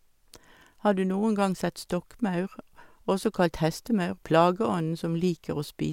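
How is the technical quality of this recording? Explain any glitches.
Nothing here stands out as a glitch; the speech comes across steady and intact, with no technical problems to point to.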